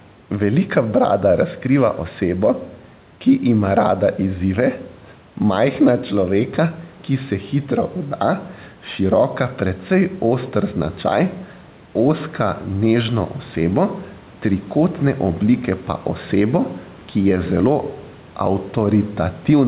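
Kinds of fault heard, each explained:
Gain pumping: Throughout the clip the level breathes, with the gain swinging by around 5 dB. The room noise sits about 32 dB below the speech. Loud and quiet passages sit closer in level than they should, so the speech sounds squashed. The likely cause is microphone gain set far too high, with a fast limiter or compressor pulling it down on each peak.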